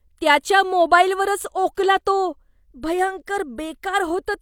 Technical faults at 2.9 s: none

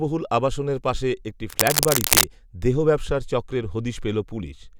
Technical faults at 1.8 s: cable scratch noise

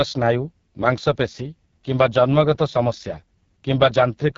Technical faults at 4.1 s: AMR wideband (HD Voice) codec

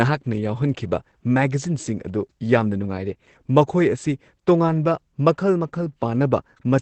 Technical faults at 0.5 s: Opus compression

